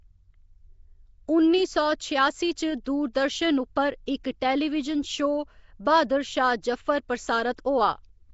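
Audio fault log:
Throughout, Nellymoser compression: the speech carries a rough, hissy halo and a smeared, underwater quality, and nothing reaches above 7.7 kHz. The cause is likely Nellymoser Asao, the old Flash microphone codec, at a rate that fits about 32 kbps. It codes short fixed blocks with very few bits per sample, so weaker bands are dropped and filled with noise, producing the hiss, while coarse block coding smears transients into that submerged, watery character.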